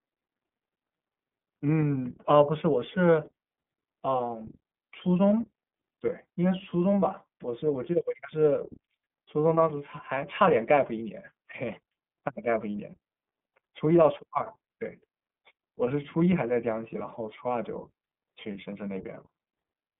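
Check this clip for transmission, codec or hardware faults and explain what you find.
One codec fault runs through the whole clip: the speech has been carried over an iLBC codec. The link squeezes the signal into a narrowband telephone channel of roughly 200 Hz to 3.4 kHz, with nothing above 3.6 kHz. It codes each 30 ms block of excitation on its own, and the grain points to iLBC's lower 13.33 kbps mode. The voice sounds boxed-in and dull, with a plainly audible rough, synthetic buzz.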